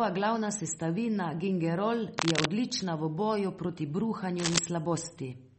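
From start to finish the speech carries plainly audible damage, likely from MP3 compression. Nothing is heard above 8.4 kHz, so the treble is cut off flat. The encoder ran short of bits and dropped weak frequency detail frame by frame. That leaves a watery, swirling texture. S sounds turn metallic and attacks blur. The thinness fits a low bitrate of around 32 kbps.

From 2.18 to 2.48 s, after "glavna sestavina gingerol" and before "odlična v boju", a burst of cable scratch noise cuts in. It is roughly as loud as the speech. A second burst runs from 4.39 to 4.59 s, somewhat louder than the speech. Both sound like rough, uneven scratching laid over the audio. The likely cause is a worn cable or connector being moved, which makes its contact resistance jump rapidly.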